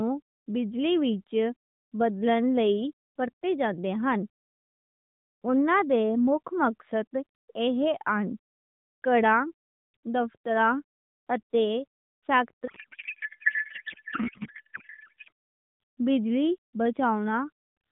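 From 12.68 s to 15.30 s a codec payload misread replaces the speech with garbled noise and warble that barely tracks it. Octet-aligned AMR frames are being unpacked as bandwidth-efficient, so every field is read from the wrong bit positions. The AMR narrowband mobile codec underneath is band-limited to 4 kHz and shows light coding damage, consistent with the 12.2 kbps mode.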